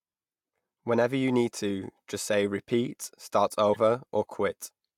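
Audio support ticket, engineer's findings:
Corrupt frame decoded. Short blips at 2.33 s after "you need to just" and 3.73–3.77 s after "'repeat' 'start". Decoder playing bit-damaged frames, misplaced energy peaking around -20 dBFS.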